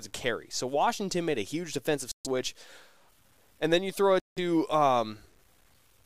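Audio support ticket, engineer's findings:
Grainy, gritty distortion on the speech, start to finish, worst on quiet tails. Error rides about 40 dB under the signal and moves with it. Likely low bit depth without dither: truncated to roughly 9 bits, no dither.

Dropout 2.12–2.27 s, right after "made a huge defensive": about 133 ms of dead silence, then resumes. Likely a Bluetooth stall: packets held up, headphone buffer ran dry.

Same again 4.20–4.38 s, after "then you throw": about 169 ms gap, likely the same Bluetooth stall.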